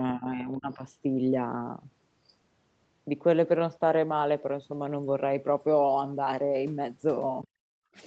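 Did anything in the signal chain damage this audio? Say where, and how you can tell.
Yes. From 0.16 to 0.83 s the speech dips by around 10 dB, likely speech suppressed in double talk: the call processing's echo canceller ducked the talker along with the echo.

Then the background is gated by the echo canceller from 7.47 to 7.94 s, dropping about 36 dB as the canceller clamps the mic while the far end plays.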